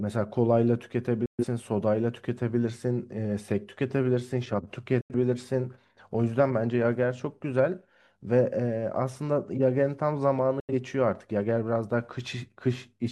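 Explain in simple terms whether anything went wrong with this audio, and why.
Digital broadcast dropouts occur at 1.26 to 1.45 s, 5.01 to 5.15 s and 10.60 to 10.74 s. Each time, the receiver stopped getting clean data, quickly faded the speech to silence for roughly a tenth of a second, then resumed. The speech in those gaps is lost.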